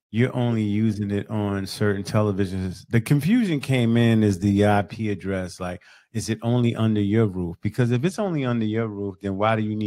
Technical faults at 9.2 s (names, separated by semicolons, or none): Bluetooth SBC bit pool drop